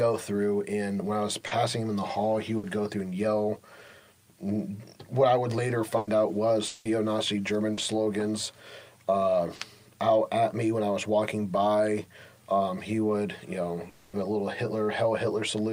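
At 1.47 s there's a short concealed packet loss: about 40 ms never arrived, so the receiver stretched the preceding sound across the hole and blended back in. You hear it as a quick smear or wobble. At 2.57 s comes a burst of packet loss, 60 ms this time, where the last sound is held as a brief buzz or hiss that fades before the audio picks up further along, with that slice gone. A longer 100 ms burst at 5.97 s does the same. At 6.67 s there's a 180 ms stretch that's entirely filled with a fading continuation of the prior sound, never dropping to silence, then resuming past the missing part. That's likely a long network dropout. Two more 40 ms smears follow at 7.73 s and 9.55 s. A second likely long network dropout at 13.89 s runs 240 ms, again filled by a decaying buzz or hiss throughout, with the audio jumping ahead afterward.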